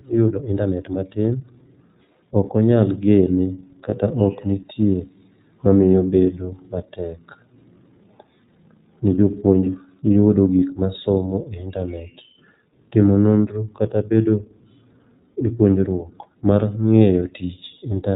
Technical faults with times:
0.00-18.15 iLBC codec
3.89-3.94 lost iLBC frames

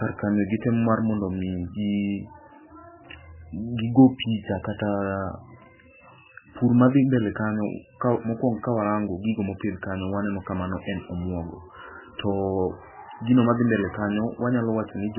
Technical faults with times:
0.00-15.18 MP3 compression

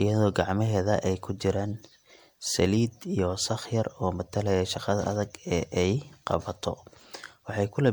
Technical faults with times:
0.00-7.92 generation loss

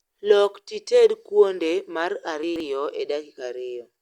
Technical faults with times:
2.43-2.60 chunks out of order

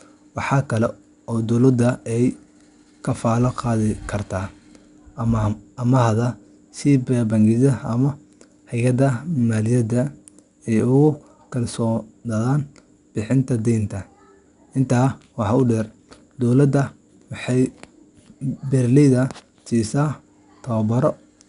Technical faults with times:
0.00-21.48 4-bit ADPCM compression

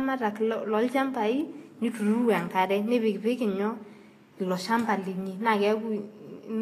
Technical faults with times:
0.00-6.61 Vorbis compression

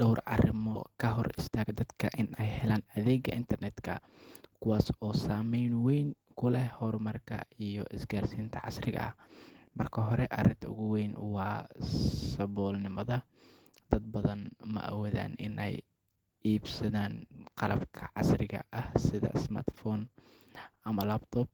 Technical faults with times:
0.95-3.76 jitter buffer speed-up

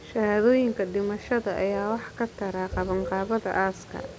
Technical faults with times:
none

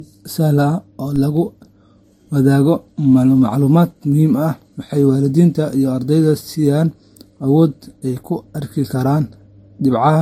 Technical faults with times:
0.00-10.21 transcoding between lossy codecs
1.16 DC step

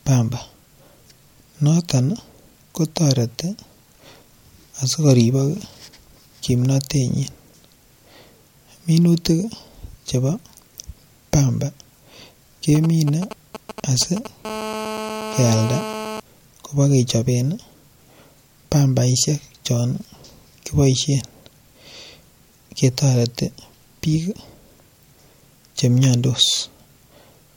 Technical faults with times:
12.75-14.27 GSM signalling bursts
14.45-16.20 GSM phone buzz

